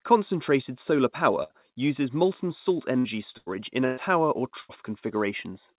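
Five brief stretches where the sound turns into a held buzz or fading hiss and then jumps ahead: at 1.43 to 1.54 s, just before "uses molten salt"; at 2.99 to 3.07 s, just after "uses molten salt"; then at 3.37 to 3.49 s, 3.85 to 4.00 s and 4.60 to 4.72 s. Each is a burst of packet loss. The receiver stretched the last sound over gaps of roughly 60 to 120 ms, fading it before playback resumed with the lost audio skipped, over a call path limited to 4 kHz.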